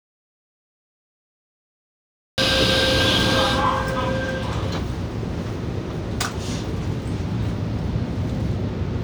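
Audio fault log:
0.00–2.38 s, audio dropout to silence: the input was likely lost, through a disconnected device, failed link or stray mute, already at the start, while recording went on writing silence. The clip opens in dead silence without room tone, then sound cuts in mid-flow.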